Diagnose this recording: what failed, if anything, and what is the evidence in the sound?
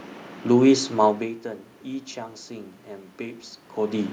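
No system fault detected.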